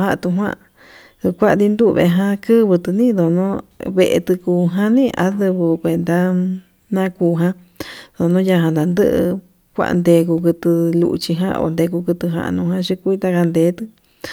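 No technical faults are audible anywhere here.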